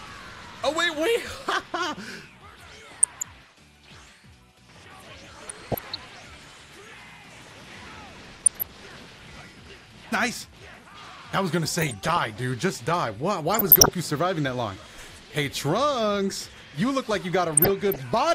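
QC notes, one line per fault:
2.89–3.24 s, 5.34–5.98 s, 8.29–8.70 s, 11.82–12.27 s, 13.54–13.90 s, 17.50–18.00 s, DAB burbling: bursts of short noise blips over the audio. Weak reception lets bit errors of roughly 0.3 to 0.7 percent through error correction, corrupting MP2 scale factors and samples so individual sub-bands jump in level for up to a frame.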